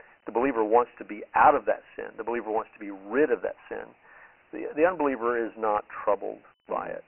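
Dialogic VOX ADPCM runs from start to finish of the speech. The audio sits in a telephone-style band from 300 Hz up, with nothing at all above 3.1 kHz, which fits 4-bit ADPCM at 6,000 samples a second, roughly 24 kbps. The coder stores each step as a coarse 4-bit guess of the change from the last sample. Its errors are heavy here, leaving a gritty, granular hiss that clings to the speech and thins the sibilants.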